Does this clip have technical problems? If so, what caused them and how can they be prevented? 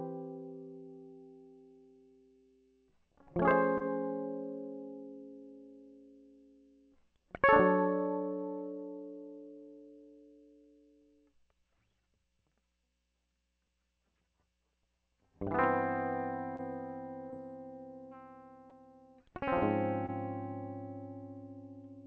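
Yes. Short concealed packet loss appears at 3.78–3.82, 16.56–16.61, 17.31–17.34 and 20.06–20.10 s. Each time about 20 ms of the music arrived too late, so the receiver stretched the preceding sound and crossfaded back, leaving a brief smear or wobble. On a spectrogram each is a short, blurred vertical strip below an 8 kHz ceiling, which fits a 64 kbps G.722 call path. A deeper jitter buffer, a steadier network or forward error correction would prevent these gaps.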